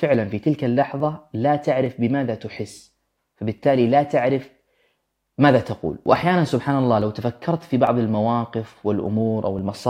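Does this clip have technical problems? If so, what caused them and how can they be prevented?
Yes. A click recurs every 0.86 s from 0.14 s to 9.59 s. These are clock drift buffer slips, likely from two independent clocks differing by roughly a thousandth, so the buffer drops or repeats a few dozen samples. Syncing both devices to one clock prevents it.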